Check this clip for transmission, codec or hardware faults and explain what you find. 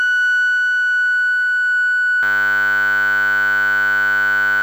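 There's one hardware-side fault in the music. From 2.23 s to the end, a system hang loop: the machine froze while the sound card kept replaying one 10 ms slice of its ring buffer. That tiny repeating chunk becomes a steady 100 Hz buzz, replacing about two seconds of music.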